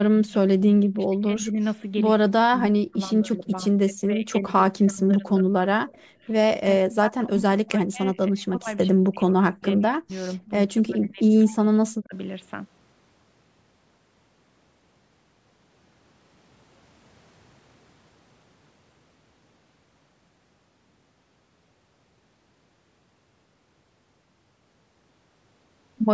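A speech recording that repeatedly loses level in its first 12 seconds, at 0.13–0.32 s, 0.63–1.59 s, 2.15–3.52 s, 3.85–6.25 s and 6.59–12.15 s. In each stretch the voice sinks or breaks up in pieces, with dips of roughly 20 dB early on and up to about 40 dB later. The longest run is around 6.6–12.2 s, where about four seconds are affected. This is likely speech suppressed in double talk: the echo canceller could not tell this talker from the far-end signal arriving at the same time, so it attenuated everything. Near the end of that stretch, at 11.52–11.56 s, a brief echo leak appears. A faint copy of the voice trails by 97 ms, about 30 dB below the speech. It is a residue that the echo canceller, likely on a loudspeaker endpoint, failed to subtract before sending back. The band stops at 8 kHz, as expected from the call's microphone path.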